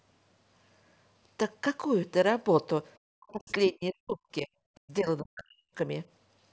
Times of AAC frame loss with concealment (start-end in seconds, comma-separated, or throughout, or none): none